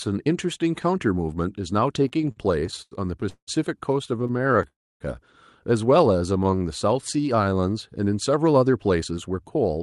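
Speech that has passed through a call path, with audio cut off above about 12 kHz and coding noise, which fits the Opus codec. From 2.03 to 2.93 s the speech stutters repeatedly, with repeated stalls (stutter): thirteen brief hangs, the longest about 96 ms, together making up about 29% of that stretch. Packets kept arriving late, so the jitter buffer ran dry over and over. Each time, the receiver stretched the last sound across the gap, adding 259 ms, but nothing was lost. A milder stutter follows from 4.17 to 4.65 s: ten tiny stalls, none longer than 16 ms, adding 100 ms and covering about 21% of that span. Two call audio freezes stop the speech outright. The first, from 3.29 to 3.49 s, holds the last sound for 182 ms, about 90 ms of it silent. The second, from 4.67 to 5.02 s, holds for 330 ms, with about 280 ms of silence. The likely cause is packets held up in transit, emptying the buffer. 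When they arrive, the speech resumes where it stopped, so the gap is inserted rather than anything removed. From 6.13 to 7.62 s a jitter buffer slow-down drags the speech to 89% of its normal rate at unchanged pitch, drawing sounds out. The receiver repeated single pitch periods and bits of pauses to rebuild its reserve, adding 172 ms. Finally, from 9.17 to 9.77 s, a jitter buffer speed-up hurries the speech to 109% at the same pitch. The buffer had built up excess delay, so it trimmed around 70 ms in short slices of a pitch period or so.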